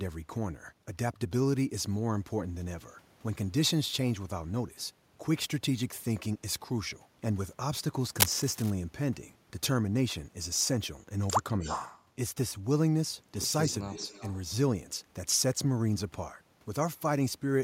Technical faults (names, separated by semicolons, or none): cable scratch noise; echo leak